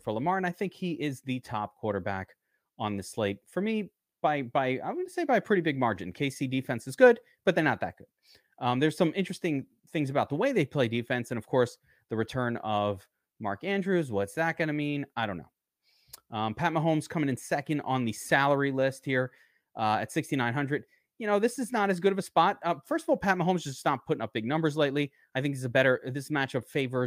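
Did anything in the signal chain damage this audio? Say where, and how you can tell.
No, nothing stood out on listening that would point to damage anywhere in the signal chain.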